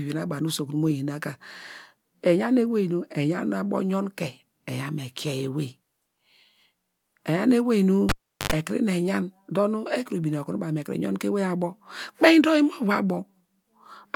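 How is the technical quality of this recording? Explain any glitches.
The recording has one clear glitch, a cable pulled and plugged in, between 8.09 and 8.52 s. A live cable carrying the speech signal was pulled out and pushed back in. As the connection broke there is a pop, then about 381 ms of near silence. On reinsertion, only the plug tip touched at first, picking up about 89 ms of 50 Hz mains buzz, before a second pop as the speech returns.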